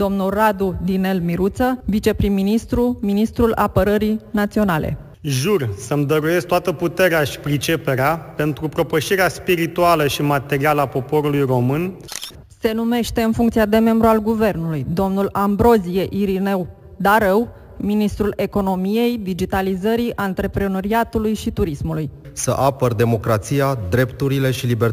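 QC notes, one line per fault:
Throughout: imaging from sample-and-hold upsampling. Each original sample is simply repeated with no smoothing, which fits audio raised from 16 kHz to 44.1 kHz. A mirrored copy of the spectrum fills 8 to 16 kHz about 22 dB below the signal, heard as a bright metallic fizz tracking the sound's level, its lowest part moving opposite to pitch. The spectrogram shows inverted content above 8 kHz; the waveform shows staircase steps.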